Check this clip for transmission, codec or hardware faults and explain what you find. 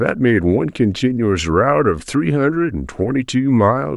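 No faults turn up when checking this clip.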